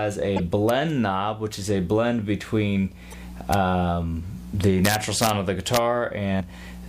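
Damaged data in a compressed stream at 0.36 to 0.40 s: corrupted bytes make the decoder misread its frames and lose sync, so it hunts for the next frame header. The result is a short glitch.

Integer overflow at 0.69 s: a peak reached the top of the integer range and wrapped to the opposite sign instead of being limited, giving a violent crack far harsher than ordinary clipping.

Damaged data in a compressed stream recurs at 3.11 to 3.14 s, with the same brief glitch as the decoder resynchronises.

Integer overflow strikes again at 3.54 s as a single sharp crack, then across a longer stretch from 4.85 to 5.29 s, where repeated peaks flip across the full range and produce a burst of cracking, and once more at 5.74 to 5.77 s.

Damaged data in a compressed stream returns at 6.36 to 6.41 s, a final blip where the decoder again drops corrupted frames and skips ahead to the next valid header.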